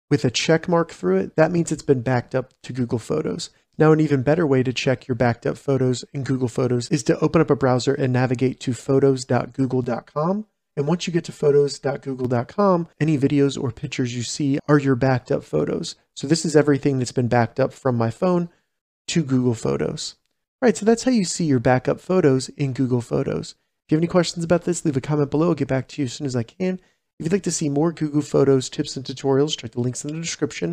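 From 9.84 to 12.25 s the sound turns hollow and phasey: channel delay (comb filtering). One channel lags by around 5 ms, so summing to mono cancels near 100 Hz and at regular steps above. Unlike flanging, these notches stay fixed rather than sweeping.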